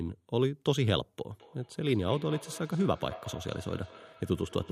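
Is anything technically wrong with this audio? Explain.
Yes. From 1.30 s to the end at 4.71 s, the speech returns as a faint, hollow repeat about a fifth of a second behind itself, peaking at about 18 dB below the speech. This is feedback echo between two devices: one device replays another's microphone signal, which that microphone picks up again, beyond either echo canceller's reach.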